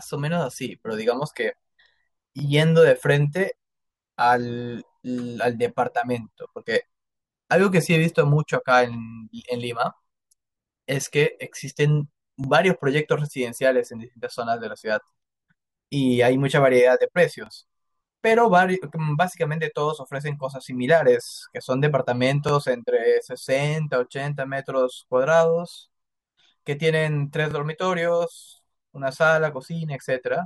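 Overlapping chunks occur at 2.39–2.42, 12.44–12.46, 17.46–17.49, 22.49–22.51 and 27.51–27.53 s, on a 5.0 s chunk grid. Each new chunk begins early, so about 23 ms of speech replays at the join, heard as a brief click or stutter.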